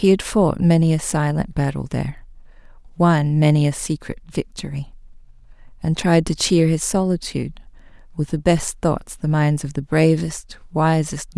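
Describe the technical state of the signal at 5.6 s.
Nothing is wrong with the signal at 5.6 s; the speech passes through intact at that moment.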